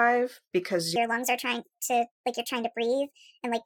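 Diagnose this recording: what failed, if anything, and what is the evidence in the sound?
A section at the wrong speed, likely from playback or an edit running the audio against a mismatched clock. From 0.96 s to the end, the speech runs 1.42 times faster than recorded, pitch rising about seven semitones at once, so the voice turns high and hurried.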